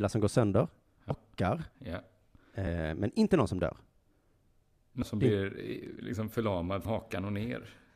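At 1.1 s, just after "som går sönder", the speech jumps forward by about a fifth of a second. These are compressed frames skipped: the decoder lost or rejected whole frames, so playback resumes later. The gap fits roughly ten frames of 26.1 ms. Because frames overlap, each join is a short smeared blip, not a click. Shorter jumps of about 70 ms follow at 2.67 s and 5.02 s, the latter just before "som det". At 6.85 s, after "eh liksom", about 150 ms goes missing.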